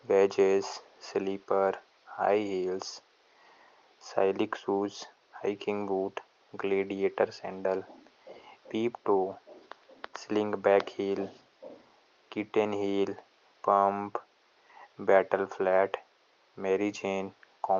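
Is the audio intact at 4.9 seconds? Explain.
Yes, the audio is intact at 4.9 seconds, with no dropout, glitch or other fault at that moment.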